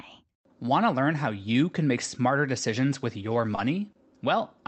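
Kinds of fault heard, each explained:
Short stall from a late packet: at 3.55 s and 3.92 s the jitter buffer ran dry, and the last sound was held for 20 ms, then 30 ms, until the packet arrived, with nothing lost. A spectrogram shows a brief smeared, repeated slice, and the waveform a slightly dipped hold.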